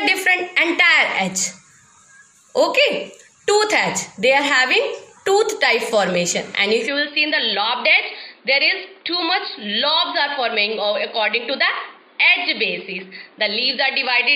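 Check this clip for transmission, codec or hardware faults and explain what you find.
One fault: from 6.87 s to the end, the sound abruptly turns duller and a few decibels quieter, with no gap at the change. The likely cause is an input switched to a poorer device, whose narrower passband cuts everything above 4.9 kHz and brings its own faint background noise, sitting well below the sound. On a spectrogram, the upper band empties at 6.87 s and a new low noise floor appears; the waveform steps down slightly in amplitude.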